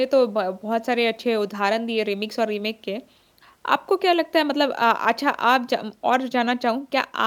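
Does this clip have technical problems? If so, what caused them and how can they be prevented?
No, there are no technical faults to hear in this speech recording. Nothing needs preventing here, as no problem arises at any point in the clip.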